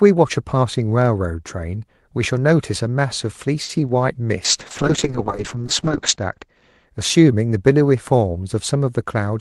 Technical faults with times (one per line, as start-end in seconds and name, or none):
3.63-3.81 short stall from a late packet
3.87-3.91 short concealed packet loss
4.46-6.93 call bitrate drop